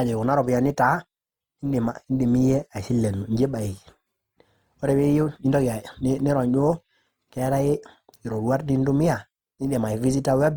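Speech throughout carries plainly audible codec damage, grainy and rough rather than MP3-style swirling, with full bandwidth to 20.4 kHz. This points to likely Opus compression in music mode, at a rate near 24 kbps.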